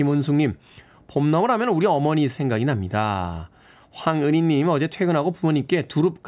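No technical faults are audible.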